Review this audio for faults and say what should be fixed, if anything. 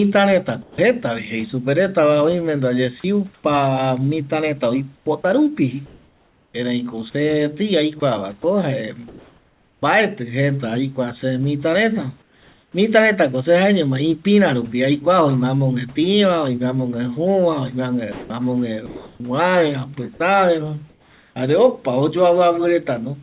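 Sound dropped by the voice detector, 0.62 to 0.78 s: a 160 ms stretch of speech gives way to steady noise, likely because the detector mistook quiet speech for background. It is a single gap, not repeated flicker.

Sound chopped by the voice detector, 3.0 to 9.82 s and 18.12 to 21.36 s: the detector likely toggled repeatedly. About 1.8 s and 1 s of syllables are replaced by synthetic noise.

Comfort noise in place of the background, 12.22 to 12.74 s: the room's real background becomes a smooth, featureless noise about 3 dB quieter. This is likely discontinuous transmission filling a pause.

Onset clipped by the voice detector, 12.72 to 12.74 s: the first 20 ms of the returning speech is missing, so it starts abruptly. The detector was likely late to reopen, and unlike a dropout only the attack is cut.

The G.711 path limits everything to below 4 kHz.

To prevent these faults, disable discontinuous transmission or lower the detector's threshold and lengthen its hangover and look-ahead.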